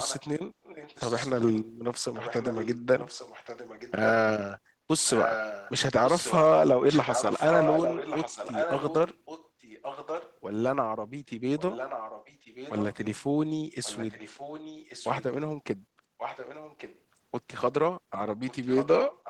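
An echo canceller at a far end playing the call over a loudspeaker likely failed to remove what its microphone picked up, so this speech carries an echo leak: a delayed copy of the voice arriving about 1.13 s late. It sits in stretches at 0.00–4.08, 5.06–10.34, 11.59–12.96, 13.83–15.24, 16.18–16.99 and 18.48–19.30 s, mostly about 10 to 15 dB below the speech, but rising to about 5 dB below between 5.06 and 10.34 s.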